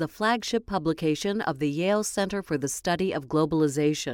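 Speech, with no technical fault to be heard anywhere in the recording. Nothing in it calls for a time or a cause.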